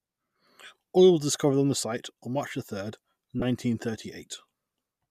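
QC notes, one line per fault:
3.40–3.42 s, lost LE Audio frames: About 20 ms of the Bluetooth stream never arrived, which fits two consecutive 10 ms frames dropping out. The LC3 decoder hid the gap by repeating the last good spectrum with randomised phase signs instead of muting. That turns the speech at that instant into a brief hissy, smeared blur. The gap is only two frames long, so the concealment never fades toward silence before clean decoding resumes.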